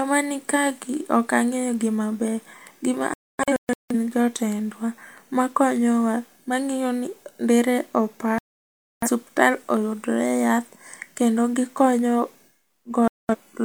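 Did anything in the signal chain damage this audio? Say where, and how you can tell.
Yes. Digital broadcast dropout at 3.14–3.95 s, 8.38–9.09 s and 13.08–13.35 s. The speech mutes outright, first in scattered holes (longest 0.26 s). Failed frames at the receiver were silenced until clean ones resumed, so that audio is lost.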